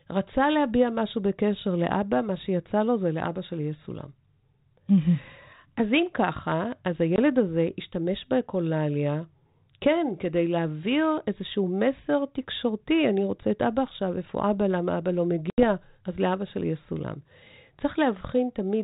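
At 7.16 s and again at 15.5 s, packet loss on an ADPCM call cuts hard silent holes, about 20 ms and then 80 ms long. The speech comes back slightly distorted while the 32 kbit/s decoder regains sync.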